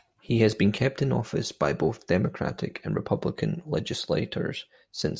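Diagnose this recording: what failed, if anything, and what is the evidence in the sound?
Nothing failed here: the speech comes through from the first syllable to the last without any dropout, glitch, distortion or other disturbance at any stage in the chain.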